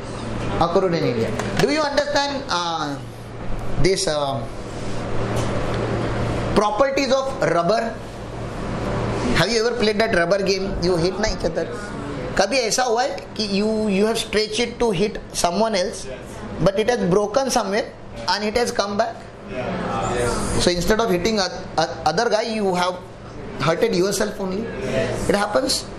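From 1.03 to 2.00 s, seven short, regular ticks sound at about seven per second, the longest a few milliseconds. These are CD scratch ticks: a blemish wipes out more data than error correction can rebuild on each disc rotation, so the player interpolates or mutes those samples.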